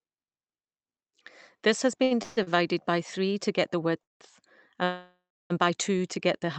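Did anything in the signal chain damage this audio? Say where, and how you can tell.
Yes. At 2.03 to 2.13 s and 2.43 to 2.49 s the sound is briefly held on one sustained tone with a faint buzz. These are short stalls from a late packet. Each time, the jitter buffer ran dry and the receiver stretched the last sound for about 73 ms and 38 ms, then resumed without losing anything.

Longer call audio freezes occur at 2.23 to 2.39 s, 4.03 to 4.22 s and 4.84 to 5.52 s. Each starts as a smeared, fading buzz. The second falls silent for about 170 ms, and the last, about 660 ms long, has about 260 ms of silence. These are likely network delays emptying the jitter buffer, with the audio resuming where it stopped. The Opus call path, band-limited to 8 kHz, is not the source of these gaps.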